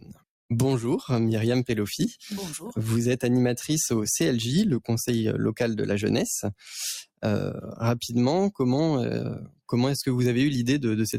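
From 0.00 to 0.24 s, and again from 9.43 to 9.61 s, sound is cut by the noise suppressor. It misreads the material as noise and pulls it down by about 20 dB and about 22 dB, leaving audible dips of roughly a fifth of a second each.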